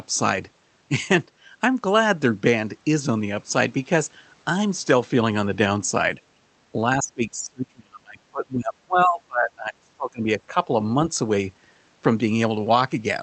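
From about 7.0 s to 10.7 s the speech repeatedly sinks, thins and breaks off in fragments, with the deepest dips falling by something like 30 dB and about three seconds of sound affected in all. This is speech suppressed in double talk. Both ends were likely talking at once, and the echo canceller, unable to tell the near talker from the far side's loudspeaker echo, pulled the level of everything down.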